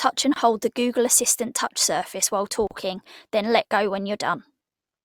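At 0.34 s, just before "hold the", and again at 2.67 s, after "assistant touch surface while", the speech breaks into a gap at a join of encoded pieces, silences of 23 ms and 37 ms left by untrimmed encoder delay and end padding. Unlike a dropout, nothing is lost: speech resumes exactly where it stopped.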